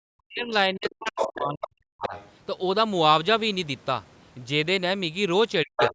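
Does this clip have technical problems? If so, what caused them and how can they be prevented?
Yes. Speech suppressed in double talk: with both sides speaking at once, the echo canceller likely turned the talker down too, cutting the voice by up to about 40 dB at 0.21–0.53 s, 0.7–2.14 s and 5.64–5.95 s. Using a headset, or a canceller with better double-talk detection, would keep the near talker from being ducked.

Other side's voice leaking through: the far voice from the loudspeaker likely escaped cancellation. It sits at roughly speech level at 0.84–1.37 s and 5.76–5.89 s, and about 10 dB lower at 1.61–1.67 s and 2.01–2.31 s. Lowering loudspeaker volume, or switching to headphones, would leave the canceller less echo to remove.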